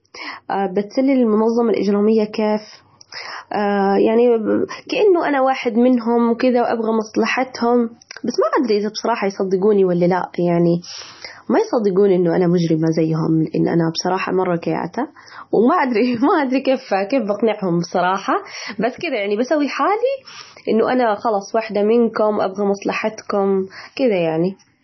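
Throughout the speech, everything above 6 kHz is gone and the sound turns watery and swirly, with smeared onsets. This is heavy MP3 compression damage, likely from a bitrate near 24 kbps. A spectrogram shows a flat ceiling at 6 kHz, with flickering holes below it.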